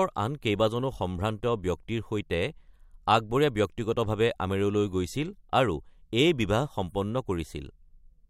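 No audible faults anywhere in the speech recording; nothing to flag.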